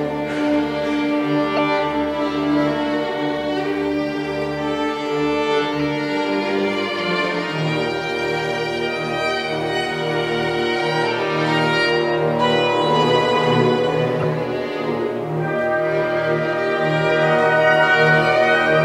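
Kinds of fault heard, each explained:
Corrupt frame decoded: at 1.56, 5.80, 6.99 and 14.20 s, brief chirp-like bursts appear, each spanning about a frame or two. Flipped bits led the decoder to apply wrong gains or codes, misplacing energy in frequency; the first and last are loud, the middle two fainter.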